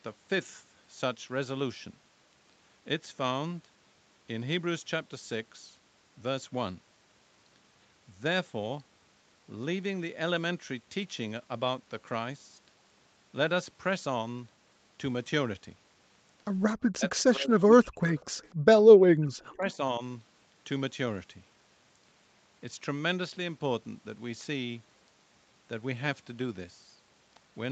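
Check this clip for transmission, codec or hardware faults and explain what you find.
Three echo-canceller faults cluster between 16.9 and 19.8 s, in speech carried over a call path whose band stops at 8 kHz.

Speech suppressed in double talk, 16.93–18.03 s and 19.12–19.81 s: the voice drops by roughly 40 dB in pieces, likely because the canceller confused it with far-end echo. Unlike gating, the speech itself vanishes.

Echo leak at 17.2, 18.07–18.25 and 18.43–18.48 s: faint copies trail 250 ms behind, about 40 dB down and about 25 dB at 18.1 s, likely incomplete echo removal. The repeat delay distinguishes it from reverberation.

Background gated by the echo canceller, 18.55–18.66 s: room sound drops about 38 dB for roughly a tenth of a second while the loudspeaker plays. Only the background dips, not the speech.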